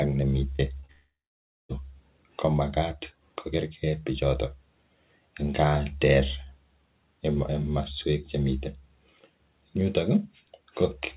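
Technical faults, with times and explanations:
0.56 s, 0.80 s and 0.86 s: short concealed packet loss. Each time about 30 ms of audio failed to arrive, and the receiver covered the gap by extending the preceding sound before blending back into the real signal. The result is a quick smear or wobble rather than a gap, and a brief sound can simply disappear. The last two run back to back, so they read as one slightly longer wobble. Unlike a dropout, the sound never thins into silence.
0.92 to 1.72 s: long network dropout. Right after the third short loss, roughly 0.78 s of audio went missing, likely because the network stopped delivering packets for that stretch. The receiver kept extending the last sound as a buzz or hiss that fades over about 0.2 s. Then comes about 0.58 s of silence before the audio resumes further along, with the lost part gone. The fading buzz or hiss and the real silence set it apart from the brief smears of short concealed loss. 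Nothing above 4 kHz is present anywhere, which points to a narrowband call codec such as G.711.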